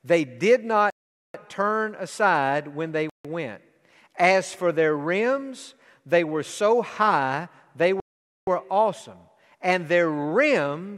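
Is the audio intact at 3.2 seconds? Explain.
No. A Bluetooth stall, likely from delayed packets draining the headphone buffer, cuts the speech to silence from 3.10 to 3.25 s, right after "turn aside when they".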